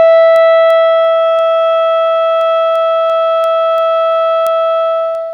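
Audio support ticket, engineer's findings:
Word clock ticks through the music, 0.36 to 5.15 s, about fifteen, roughly every 0.3 s, uneven strength. Receiving device likely free-running on its own clock, around 70 ppm off the source, so a sample slips or doubles at each slide. Worth checking sync settings.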